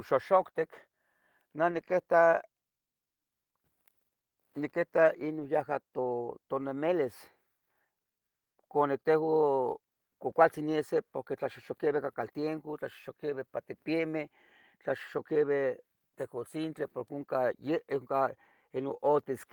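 At 1.71 to 1.89 s, 5.39 to 5.45 s, 10.29 to 10.31 s (just after "cuani tehua"), and 13.29 to 13.31 s, the speech turns briefly rough and grainy. Each time, lost packets were rebuilt from error correction: the following packet carried a low-bitrate copy, which the decoder played instead. Unlike packet-loss concealment, there is no gap or smeared repeat, only a coarser stretch. The first, longest patch fits five separate lost packets.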